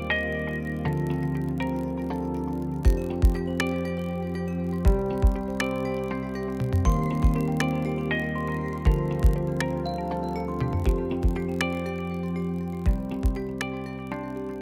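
From start to finish a low, steady buzz at about 43.1 Hz sits under the sound, with a tiny periodic gap chopping it at that rate. This is a block size mismatch (padded): one stage hands over blocks slightly shorter than the next stage reads, and the missing tail is filled with silence. The rate fits 1024-sample blocks at 44.1 kHz. The padding is so small that playback runs barely slower, at a speed of 0.999.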